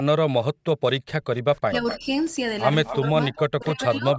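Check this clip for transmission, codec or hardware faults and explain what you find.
Three kinds of echo-canceller fault appear in this speech clip. They are background gating, speech suppression during double talk, and echo leak.

Background gated by the echo canceller affects 0.00 to 0.83 s. While the far end's audio played from the loudspeaker, the canceller turned the microphone down hard, by about 40 dB at its deepest. Most of that stretch, roughly 0.7 s, is affected. The room sound sinks or vanishes, then comes back when the canceller releases.

Speech suppressed in double talk occurs at 1.18 to 1.23 s, 1.69 to 2.06 s and 2.97 to 4.16 s. The likely cause is both sides talking at once. The canceller could not tell the near talker from the loudspeaker echo, so it turned everything down. The dips are deep, around 35 dB in the first, a milder 15 dB or so in the second and about 30 dB in the last. 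The talker's voice sags or breaks up in pieces.

Echo leak is heard at 1.56 to 2.00 s, 2.84 to 2.96 s, 3.36 to 3.68 s and from 4.14 s to the end. A delayed copy of the voice returns 252 ms late. It sits roughly 10 to 15 dB below the direct speech. The likely cause is a loudspeaker at one end whose canceller left part of the pickup in place and sent it back. The call's microphone processing, with nothing above 8 kHz, is not a fault.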